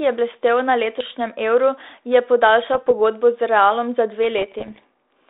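Bit errors on an ADPCM link appear three times: 0.97 to 1.14 s, 2.74 to 2.91 s, and a longer, denser stretch from 4.38 to 4.84 s, where the flipped bits are more frequent. Each corrupted bit throws off the decoder's step size and prediction, so instead of a single click you hear pops trailing into rough, crackly bursts with brief jumps in level. Packet loss would leave gaps or muffled fill, not this ringing grit. The telephone-band, roughly 32 kbit/s coding stays intact around the bursts.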